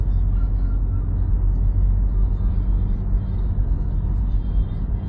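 Throughout, nothing sounds above 7 kHz, and the sound is dull and smeared. This is likely low-bitrate audio saved at a high bitrate, which fits MP3 at about 31 kbit/s.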